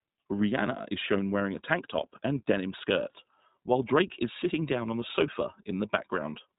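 From start to finish the speech carries iLBC codec damage, plainly audible. Nothing passes above 3.8 kHz, so the top end is gone, and each short frame is coded independently, leaving a slightly rough, synthetic texture that fits the 20 ms, 15.2 kbps mode.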